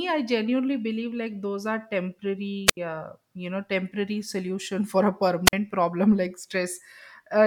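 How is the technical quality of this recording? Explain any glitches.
The speech track has two short wireless microphone squelch dropouts. The first runs from 2.66 to 2.77 s with a mute of about 75 ms. The second comes right after "for a", from 5.46 to 5.53 s, muting for about 48 ms. In each, the FM radio link fades, the receiver's squelch shuts the output off, and you get a quick swell of hiss, a hole of near-silence, then the speech snapping back.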